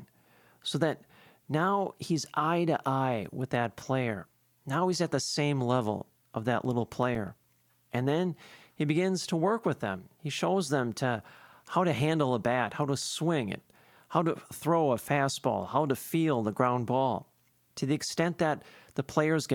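Just after "same level of that", from 6.65 to 7.53 s, there's a run of CD scratch ticks: eight small regular clicks, each only a few milliseconds long. A blemish passing once a revolution is wiping out more data than error correction can rebuild, so the player patches over the gaps.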